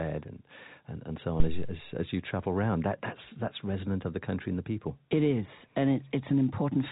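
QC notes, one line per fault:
1.40–1.83 s, phantom power thump: between "and and and so" and "as you travel around", a deep thump rises and dies away, decaying over about 98 ms. A supply switched on or off on the live input sends a voltage step through the coupling capacitors. Unlike a plosive or handling bump, it is an electrical step rather than acoustic movement at the microphone, so it comes with no breath or rubbing noise. It passes through the telephone-band G.711 coding, which carries nothing above 3.8 kHz.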